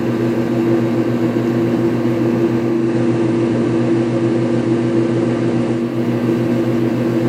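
At 2.61 s, over about a third of a second, a faint hiss rises, sitting roughly 35 dB below the signal. The loudness stays the same. At 6.03 s the quiet background returns. This is digital radio blending to analogue: the receiver lost its digital stream and cross-faded over 346 ms to the station's FM broadcast, then faded back once the digital signal recovered.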